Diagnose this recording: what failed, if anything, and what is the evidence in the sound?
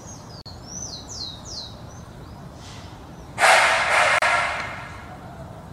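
The failure is at the codec stage: the audio was encoded in separate pieces and joined without trimming, so each piece's encoder start-up delay and padded final frame stayed in. The result is a gap at a join of encoded pieces, heard twice: a silence of about 43 ms at 0.41–0.46 s and about 34 ms at 4.19–4.22 s. Each opens in continuous sound, with edges smeared by the codec, and the sound resumes exactly where it broke off.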